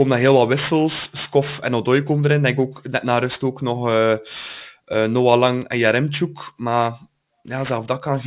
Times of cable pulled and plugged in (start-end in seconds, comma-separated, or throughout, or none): none